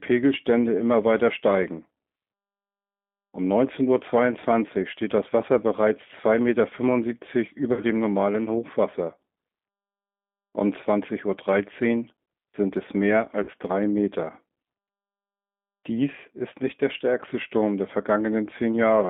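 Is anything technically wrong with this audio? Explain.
Yes. Throughout, the speech is confined to roughly 200 Hz to 3.6 kHz and sounds rough and synthetic, consistent with the G.729 codec at 8 kbit/s, which rebuilds speech from a vocal tract filter plus sparse pulses.

VoIP packet loss concealed by the speech codec occurs at 7.73–7.83 s, just before "dem normalen", and at 13.43–13.50 s, just after "sind es mehr". Each time, about 40 ms of audio is missing. The decoder extends the last pitch and filter into a fading buzzy tone or coloured noise, and the sound stays weakened briefly afterwards.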